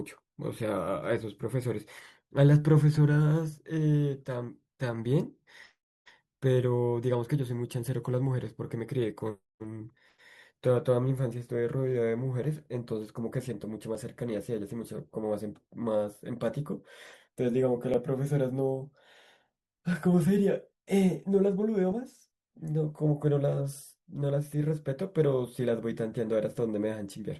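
Overlap between stream segments at 1.97, 9.97, 13.95, 17.94 and 21.92 s in this speech clip: each lands at a 2-second segment boundary, where overlapping time stamps make the player discard 5 to 15 ms of audio, so the waveform jumps and a brief click or skip is heard.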